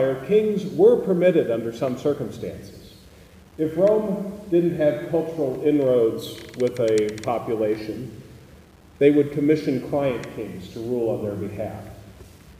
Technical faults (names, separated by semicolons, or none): low bit depth without dither